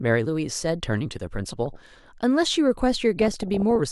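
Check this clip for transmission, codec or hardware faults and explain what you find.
DAB burbling affects the speech twice, from 1.60 to 2.09 s and from 3.19 to 3.76 s. Bit errors, at roughly 0.5 and 0.7 percent, slip past error correction and corrupt MP2 sub-band samples and scale factors, so short noise blips appear in single sub-bands and bands jump in level for up to a frame.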